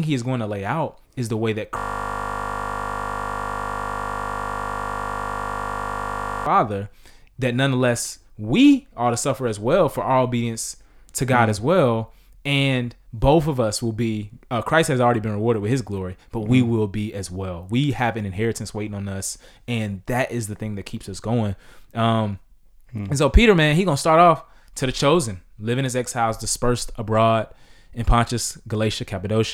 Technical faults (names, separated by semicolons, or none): system hang loop